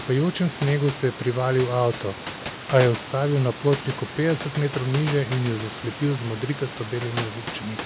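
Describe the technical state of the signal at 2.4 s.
At 2.4 s the signal is intact, with no fault present; the room noise sits about 13 dB below the speech, and the call path's band limit leaves nothing above 4 kHz.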